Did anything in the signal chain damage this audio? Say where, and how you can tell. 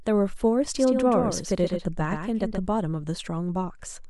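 Yes. From 0.77 s to 2.67 s the speech is a doubled audio track. A second full-band copy runs roughly 150 ms behind the original and about 5 dB quieter. It switches on and off abruptly, with no decay or room colour. The likely cause is a second, slower capture path at the driver or buffer stage being mixed in. On a spectrogram every syllable's harmonics reappear shifted right by about 150 ms. The waveform shows a sudden step at each boundary.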